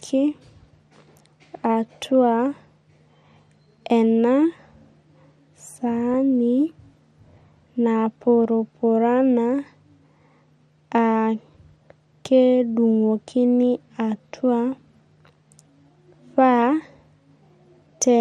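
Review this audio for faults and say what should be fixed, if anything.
Throughout the speech the top end sounds dull, with a granular, gurgling edge. This is likely MP2 compression at a low rate, which fits about 80 kbps, where too few bits force whole upper sub-bands off and leave the rest coarsely quantised. A spectrogram shows high-frequency bands flickering in and out in blocky steps. Encoding at a higher bitrate would avoid it.

DAB burbling appears at 6.14 s and again from 7.85 to 7.97 s as brief bursts. Bit errors slipping past error correction corrupt samples, putting short blips of noise in single sub-bands. A spectrogram shows isolated bright rectangular patches in narrow bands. A stronger, cleaner reception path would prevent it.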